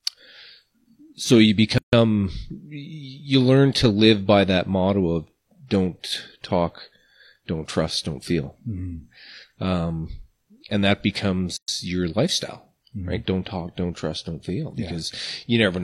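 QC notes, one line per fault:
1.78–1.93 s and 11.57–11.68 s, gap at a join of encoded pieces: after "so you" and "and that", speech drops out for 147 ms and 116 ms, then resumes mid-flow. Untrimmed encoder start delay and last-frame padding leave flat waveform stretches and blank vertical spectrogram bands with smeared edges.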